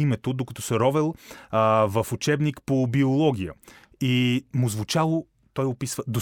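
No technical faults are audible.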